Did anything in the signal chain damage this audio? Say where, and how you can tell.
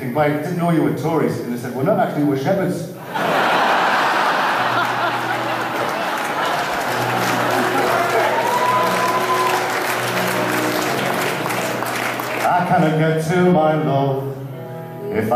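Yes. Compressed frames were skipped at 7.50 to 7.53 s and again at 10.99 to 11.03 s, a fault at the codec or storage stage. At each point the audio jumps ahead by roughly a twentieth of a second, which fits one lost frame of 46.4 ms that was missing or rejected by the decoder as damaged.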